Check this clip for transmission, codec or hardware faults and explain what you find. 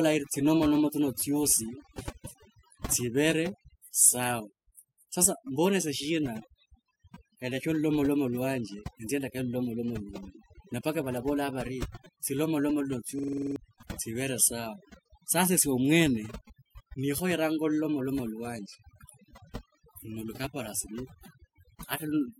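Two faults are present: heavy-handed noise processing across the whole speech clip, and a brief playback freeze.

Overdone noise removal, throughout: the suppressor cuts every band near its noise estimate, leaving near-silent gaps with twinkling specks.

System hang loop, 13.19 to 13.56 s: the system stalls while the hardware replays one 46.44 ms buffer eight times, which fits a 2048-sample buffer. This produces a rattling 21.5 Hz buzz and loses about 0.4 s of audio.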